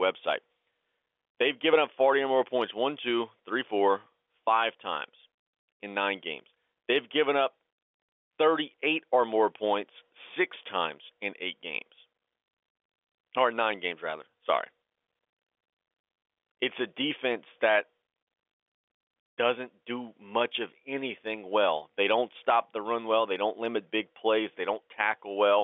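Gain pumping runs through the whole speech clip. The gain ducks by about 10 dB under every loud sound. Loud and soft parts sit close in level and sound squashed. The likely cause is microphone gain set far too high, with a fast limiter pulling it down.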